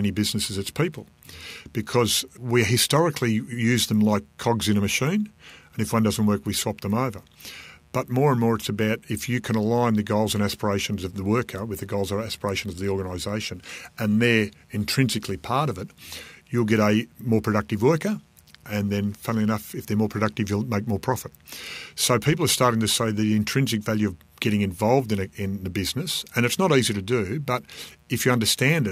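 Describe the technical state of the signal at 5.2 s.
At 5.2 s the speech sits over a mains buzz that runs through the whole clip, some 40 dB below the speech. Switching spikes from a dimmer, rectifier or poor shielding enter twice per 60 Hz cycle, so the interference carries a dense ladder of 60 Hz harmonics climbing into the kilohertz range. That gives a raspy, edged buzz rather than the smooth, low, nearly pure tone of plain hum, which holds only the fundamental and a few low harmonics.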